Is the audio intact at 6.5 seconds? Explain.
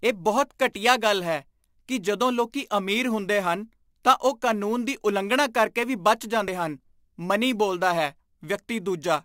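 No. At 6.48 s, damaged data in the compressed stream makes the decoder lose sync, giving a brief glitch seen as a vertical smear of broadband energy and a waveform discontinuity. Sample clock jitter of several microseconds also adds a faint roughness about 25 dB below the signal, showing as a haze tracking loud, bright passages.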